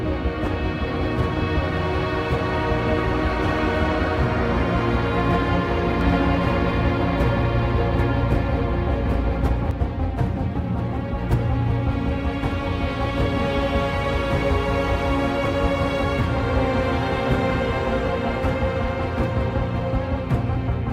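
A doubled audio track runs from 6.01 s to 9.71 s: a second full-band copy of the sound trails the original by roughly 0.7 s, a few decibels quieter, with no decay or room colour, starting and stopping abruptly. The likely cause is the same signal captured again through a slower path.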